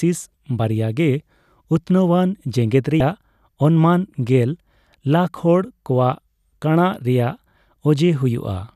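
At about 2.98 s a brief glitch cuts through the speech and lasts until roughly 3.01 s. This is damaged data in the compressed stream: a stretch of the encoded bytes was corrupted, so the decoder could not read those frames correctly, lost its place in the stream, and had to hunt for the next valid frame header before normal decoding resumed.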